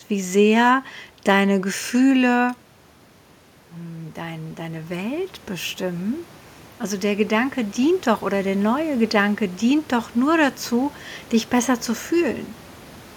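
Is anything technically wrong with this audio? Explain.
Yes. From 3.77 to 8.96 s there is automatic gain rising. The input level drops by about 12 dB after the talker moves away near 2.5 s. The gain control slowly adds about 9 dB, so the voice and the room noise swell together.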